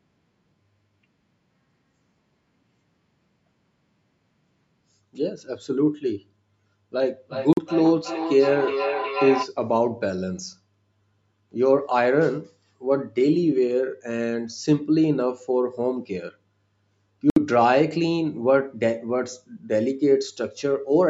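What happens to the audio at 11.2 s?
Nothing goes wrong at 11.2 s: the speech there comes through intact, with only the normal call microphone processing and its bass roll-off and upper limit around 8 kHz shaping the sound.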